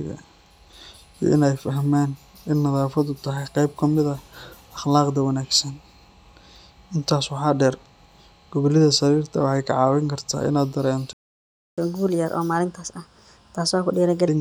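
A speech recording with a playback stall from 11.13 s to 11.78 s: the audio cuts to silence for about 0.65 s mid-flow, likely because the player ran out of buffered data or its thread was blocked. Catch-up at higher speed follows from 11.78 s to 14.28 s. The player resamples the backlog at 1.25× speed, raising the pitch by roughly four semitones, then returns to normal speed and pitch.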